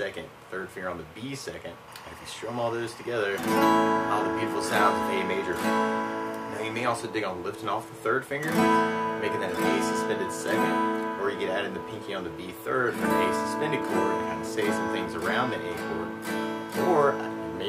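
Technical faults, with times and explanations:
1.88 to 7.04 s: timecode bleed. A steady chirping warble sits behind the sound, roughly 20 dB below it, flipping between two pitches an octave apart, around 1 kHz and 2 kHz. Linear timecode from a neighbouring track or cable is leaking into the audio. Its square-wave code switches between those two frequencies as it carries bits, and the 24 frames-per-second rate gives the warble its regular, busy texture until the leak stops at 7.04 s.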